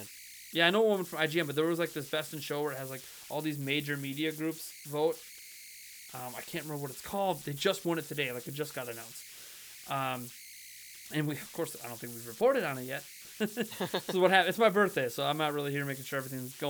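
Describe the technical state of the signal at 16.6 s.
At 16.6 s the speech carries video or display buzz, present here as it is through the whole clip. A screen or video cable is leaking into the audio path. The result is a buzz at the 59.94 Hz picture field rate, with hash above it. A thin, very high tone sits at the 15.7 kHz line rate. The buzz stays low, far beneath the speech, but it is steady.

Converter idle tones are also present at this moment, again throughout. The delta-sigma converter runs without dither. When the input gets small, it locks into repeating bit patterns. Those patterns produce a whistle, here around 2 kHz, in pauses. Under quiet speech they become grainy noise. The error is strong, about 17 dB below the signal.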